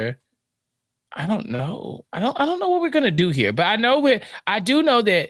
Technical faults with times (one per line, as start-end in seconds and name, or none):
1.55-1.62 short concealed packet loss
3.15-3.21 short concealed packet loss